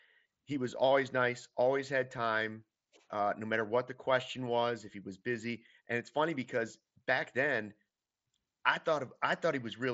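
No technical faults detected.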